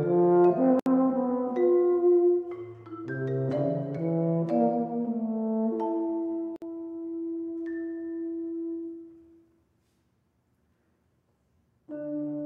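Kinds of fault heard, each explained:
Gap at a join of encoded pieces: the continuous sound drops out briefly and then resumes from where it stopped, first for about 66 ms at 0.80 to 0.86 s, then for about 58 ms at 6.56 to 6.62 s. The audio was encoded in separate pieces and joined without trimming, so each piece's leading encoder delay and padded final frame remain as silence. The codec blurs the gap's edges, making the fully silent part shorter still.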